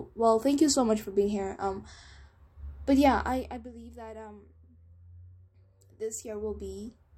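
From 5.89 to 6.97 s there is zipper noise: a level change of about 20 dB happens in unsmoothed steps, roughly a hundred per second, ticking over the speech.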